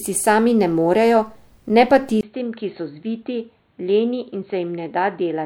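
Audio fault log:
2.21–5.45 s, input switched to a poorer device: 20 ms gap, then duller, quieter sound, likely a device change; spectrogram empty above 4.3 kHz, waveform drops.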